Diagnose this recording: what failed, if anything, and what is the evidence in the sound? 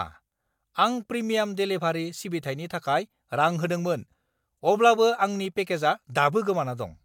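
Nothing failed; no stage shows an audible fault here.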